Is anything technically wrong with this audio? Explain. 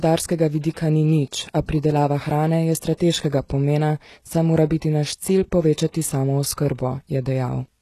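Yes. Throughout the speech there is a hard ceiling at about 12.4 kHz, and the treble below it sounds synthetic: s sounds come out gritty and lispy, with a metallic edge. The likely cause is HE-AAC compression at a low rate, consistent with roughly 16 kbps. That codec encodes only the lower spectrum and fills in the top by copying lower bands upward under a coarse envelope, so the rebuilt harmonics fail to line up with the real ones.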